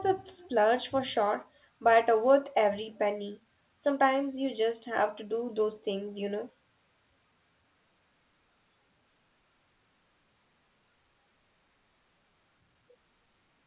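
The speech here has no technical fault. What can be heard is the telephone coding path working as designed: nothing above 4 kHz, which fits A-law telephone coding at an 8 kHz rate, and a faint noise floor that rises and falls with the speech level.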